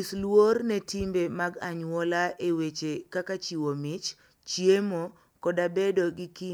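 No technical faults can be heard anywhere in the recording.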